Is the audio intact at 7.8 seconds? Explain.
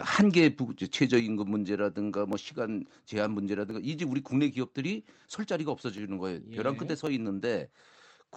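Yes, the audio is intact at 7.8 seconds, with the speech passing through the WebRTC call path as it does throughout.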